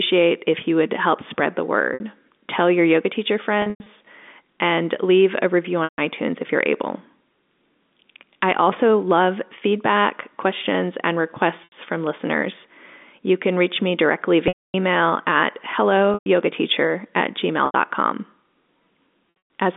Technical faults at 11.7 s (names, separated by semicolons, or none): packet loss with pitch repetition